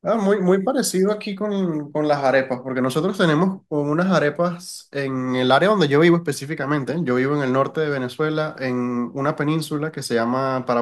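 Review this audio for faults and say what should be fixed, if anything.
No faults turn up in this audio, so nothing needs to be fixed.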